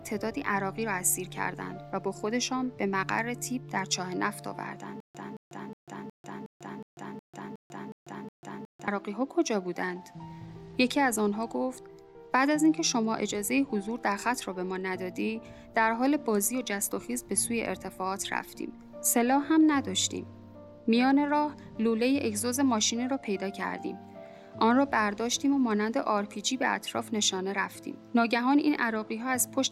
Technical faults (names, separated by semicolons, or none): stutter with silent gaps